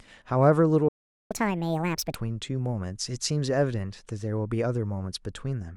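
A playback stall runs from 0.88 to 1.31 s: the speech cuts out in mid-flow and the output sits silent for about 0.42 s before the sound resumes. The likely cause is that the player's buffer ran dry or its audio thread was held up, so nothing was delivered to the output until data arrived again.

Catch-up at higher speed follows at once, from 1.31 to 2.15 s. Having fallen behind during the stall, the player works through its backlog by resampling the audio to run 1.5 times faster. Because the samples are simply played back more quickly rather than time-stretched, speed and pitch rise together, lifting the speech by about seven semitones. The delivery sounds hurried for this stretch, then drops back to its normal rate and pitch at 2.15 s.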